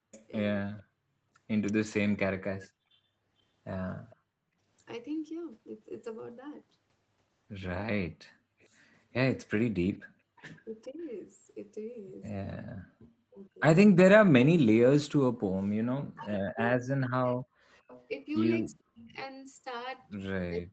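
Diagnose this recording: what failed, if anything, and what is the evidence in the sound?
The speech dips by up to about 40 dB during 0 to 4.43 s, roughly 0.7 s in total, and from 10.89 s to the end. This is likely speech suppressed in double talk by call processing: breaks in the talker, not gaps in the line.

A faint copy of the speech returns 453 ms late, about 30 to 35 dB down, at 0.12 to 0.83 s, 8.61 to 10.61 s and 17.91 s onward. This is likely an echo leak in call processing, because the copy has a fixed delay, unlike reverberation.

The room sound drops by about 40 dB for roughly 150 ms between 1.0 and 1.19 s. This is background gated by the echo canceller, a call-processing stage, and it is not a network dropout.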